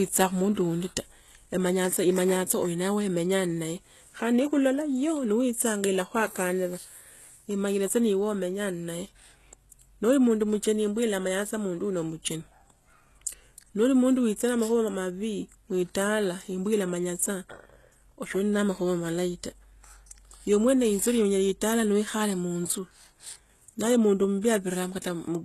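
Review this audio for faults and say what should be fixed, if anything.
Throughout the speech the treble is plainly damaged, and nothing sounds above 12.3 kHz. The upper band sounds rebuilt rather than captured, likely from HE-AAC compression at a bitrate around 16 kbps. The codec keeps only the lower spectrum and fills the treble by copying lower bands upward under a coarse envelope, so harmonics don't line up across the crossover and s sounds turn gritty, metallic or lispy. Plain low-bitrate AAC or MP3 would instead cut off lower and sound dull rather than synthetic. To prevent it, encode with plain AAC or Opus at a higher bitrate, or keep a lossless master.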